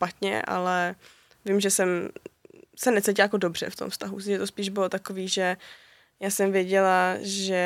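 No technical faults are audible.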